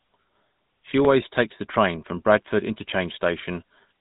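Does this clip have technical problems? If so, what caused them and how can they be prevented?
Yes. Throughout the speech the sound is buzzy and gravelly, with a plainly audible roughness and no content above about 3.8 kHz, leaving it dull and boxed-in. This is GSM full-rate codec damage: the codec describes the vocal tract with a filter and rebuilds the excitation from regularly spaced pulses, discarding most of the detail, at a rate that fits 13 kbps. To prevent it, capture or transmit the speech through a wideband codec rather than a GSM full-rate path.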